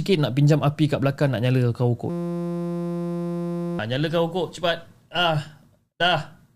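Speech clip with a system hang loop from 2.10 to 3.79 s, just after "belakang nak nyala kau": a 5.8 ms chunk repeats as a 172 Hz buzz, which fits a 256-sample buffer, costing about a second and a half before "nyala kau ukur cepat".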